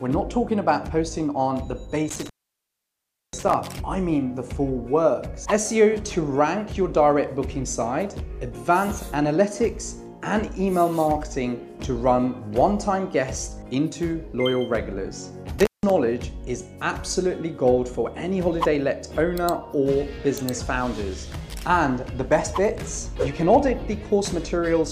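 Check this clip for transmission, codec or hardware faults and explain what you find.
Two dropouts from intermittent contact, at 2.09 to 3.54 s (open about 1.04 s) and 15.59 to 15.90 s (open about 0.16 s). A loose cable or plug briefly breaks the signal path, so the sound cuts out with crackle at each edge and faint hiss while open.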